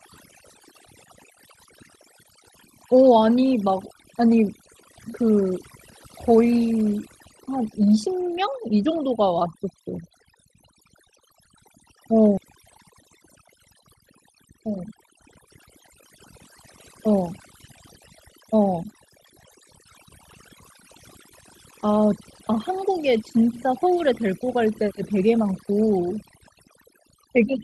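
Overdone noise removal runs through the whole speech recording. The noise reduction is set far too aggressively, so any frequency band that sits close to the estimated noise floor is pushed down hard or switched off entirely. Low-level parts of the voice are removed along with the noise. The background drops and breaks up into twinkling, tonal specks, and the voice has its softer detail stripped out.

At 12.37–12.39 s there is a skip ahead. Playback jumps forward with no gap and nothing inserted to cover the join, and around 0.4 s of audio goes missing. The stretch was discarded while later audio was already queued, so the material on either side of the cut is spliced almost directly together. The listener hears an abrupt discontinuity where part of the utterance simply vanishes, and the delay drops by roughly that same amount.

Two episodes of jitter buffer speed-up follow, at 14.34–15.47 s and 18.54–18.94 s. 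In each, the buffer was holding more audio than its target, so the receiver trimmed out repeated short chunks of one or a few pitch periods to catch up. The first runs at 105% speed and removes some 70 ms. The second is faster, at 110%, and removes about 50 ms over a shorter span. Pitch is unchanged, but the speech sounds hurried during both passages.

At 22.21 s a single sharp click marks dropped samples. The waveform steps abruptly from one value to a later one, which shows up as a thin vertical line across the spectrum. The likely cause is a loss of about two samples, a few hundredths of a millisecond, which is far too brief to remove any audible sound and is heard only as the click itself.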